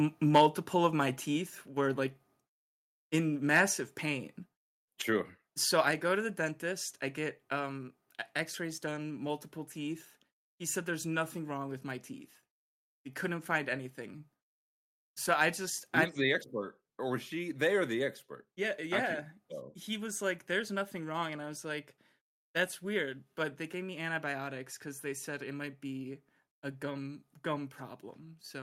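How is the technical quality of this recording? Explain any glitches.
The recording has two technical problems near the start: a distorted peak from an overloaded microphone, and two sudden drops in level.

Microphone overload, 0.35 to 0.46 s: the input likely ran about 6 dB hotter than the converter could take, so the tops of the loudest waveform peaks were cut flat. Around a twentieth of the samples in that stretch are clipped, giving a harsh, crackly edge.

Microphone volume stepped down, at 0.38 s and again at 5.91 s: each time, speech and background fall abruptly by about 3 dB. This is likely the call software reacting to loud or clipped input by lowering the microphone's gain in a single step.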